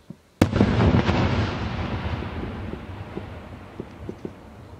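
No technical faults are audible.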